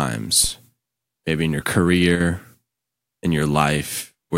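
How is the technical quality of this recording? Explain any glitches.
The recording has two glitches, both brief.

A phantom power thump occurs from 0.44 to 0.52 s. Phantom power switching on or off on the live input sends a voltage step through the coupling capacitors, producing a deep low-frequency thump that dies away quickly, in about 16 ms.

Just after "maybe in your", from 2.15 to 2.20 s, the level abruptly falls by about 6 dB. The likely cause is one channel dropping out. With one stereo side missing, the mono sum loses half of what both sides shared.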